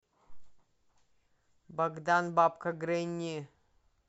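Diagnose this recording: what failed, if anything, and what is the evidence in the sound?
Nothing failed in this recording.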